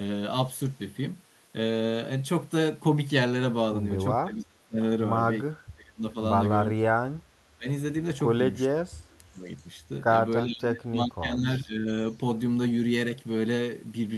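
An echo canceller that likely could not tell this talker from loudspeaker echo while both sides spoke kept turning the speech down, which is speech suppressed in double talk. The speech dips or breaks into pieces from 4.23 to 4.79 s, 5.49 to 6.16 s, 6.71 to 7.15 s, 7.57 to 7.67 s and 8.72 to 9.47 s, with the deepest drops around 20 to 35 dB. From 9.57 to 9.66 s, residual echo likely slipped past an echo canceller, an echo leak. It is a faint scrap of voice arriving 385 ms late, about 35 dB below the speech. Suppression returns from 10.45 to 11.88 s, the longest stretch, with the speech pulled down by about 25 dB at its lowest.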